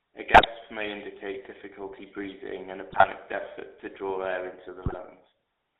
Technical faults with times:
0.00-5.79 GSM full-rate codec
0.34-0.47 GSM bit errors
2.90-3.06 GSM bit errors
4.82-4.95 GSM bit errors

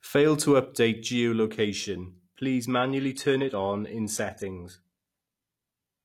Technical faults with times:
2.70-6.04 adaptive stream at a lower bitrate

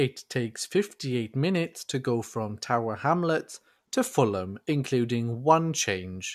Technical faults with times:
none

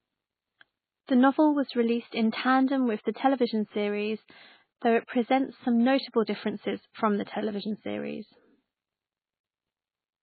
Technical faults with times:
0.00-10.23 MP3 compression
4.79-4.82 pre-echo
5.07 pre-echo

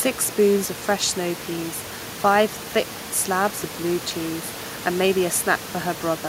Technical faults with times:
none

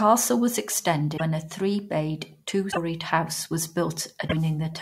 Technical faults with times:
1.16-1.21 broken MP3 bit reservoir
2.71-2.77 broken MP3 bit reservoir
4.27-4.33 broken MP3 bit reservoir

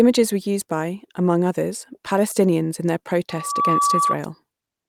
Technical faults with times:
3.29-4.16 loudspeaker feedback squeal

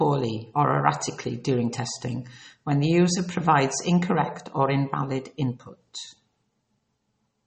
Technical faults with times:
0.00-7.46 MP3 compression

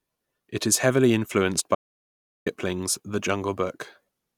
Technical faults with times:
1.75-2.46 audio dropout to silence

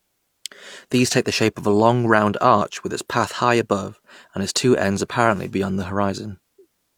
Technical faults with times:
none

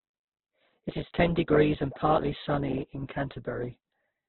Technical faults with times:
0.00-4.28 Opus compression

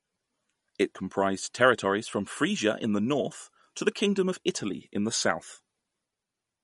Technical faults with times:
0.00-6.64 MP3 compression

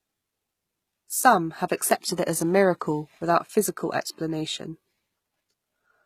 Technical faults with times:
0.00-6.05 HE-AAC compression

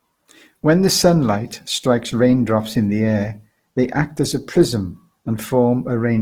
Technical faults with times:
0.00-6.21 Opus compression

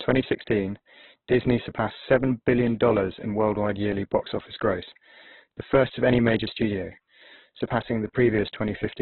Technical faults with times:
0.00-9.01 Opus compression

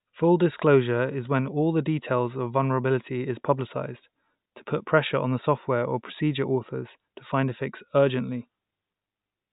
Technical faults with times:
none

